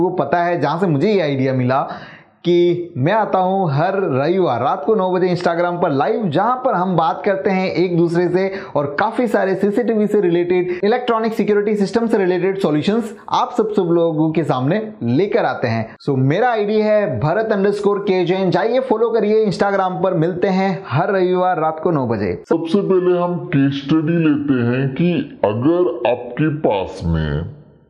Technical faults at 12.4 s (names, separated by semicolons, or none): none